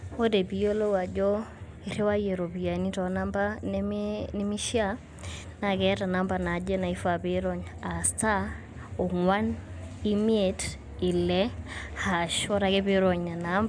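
No technical faults can be heard anywhere in this recording.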